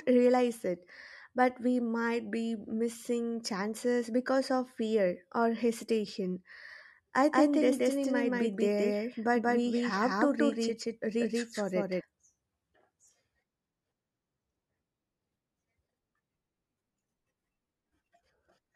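From 7.33 s to 12.01 s the speech carries a doubled audio track: a second, full-band copy runs about a fifth of a second behind the original at roughly the same level, with no decay or room colour. It starts and stops abruptly. The likely cause is the signal being captured twice, once through a slower path. On a waveform each syllable envelope repeats about 200 ms later, and a spectrogram shows every onset duplicated at that fixed offset.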